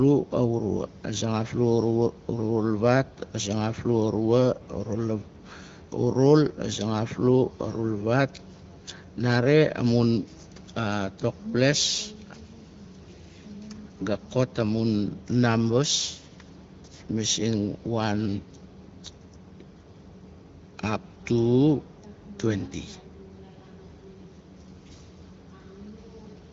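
No technical faults occur anywhere in this speech clip, which comes through the AMR wideband (HD Voice) codec with its usual top end near 7.4 kHz.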